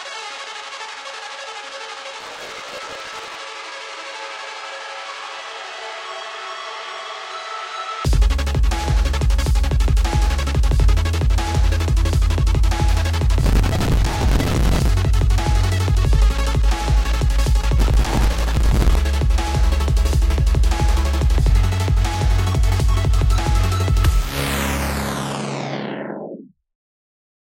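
A gritty tearing crackle rides on the sound three times: from 2.20 to 3.35 s, from 13.41 to 14.89 s and from 17.79 to 18.95 s, stopping cleanly each time. This is processor overload crackle. The processor repeatedly misses its deadlines for small buffers of around 5 ms, about a hundred per burst, and each missed slot replays a fragment of old audio with hard edges, which together produce the crackle.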